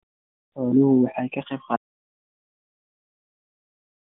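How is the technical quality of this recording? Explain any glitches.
The big problem is that the audio dies partway through. It's running over a narrowband mobile path throughout, with nothing above about 3.7 kHz and only light codec coloration, which fits AMR-NB at 12.2 kbps.

At 1.76 s there's an audio dropout to silence that lasts right to the end. The input was likely lost, say a link failure or a mute, while recording carried on writing silence. So the speech cuts off mid-flow into silence with no room tone, and whatever followed is gone.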